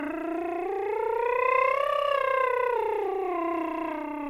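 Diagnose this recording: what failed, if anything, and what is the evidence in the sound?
Nothing failed; the music carries no audible fault anywhere.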